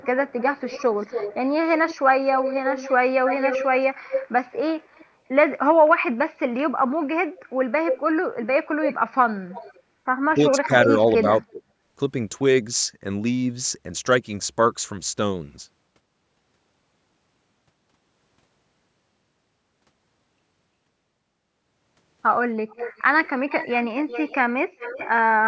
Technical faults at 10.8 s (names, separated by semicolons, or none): speech suppressed in double talk; echo leak